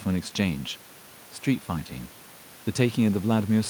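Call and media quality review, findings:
Nothing to flag on this speech clip; no audible issues turned up, so there's nothing to ticket.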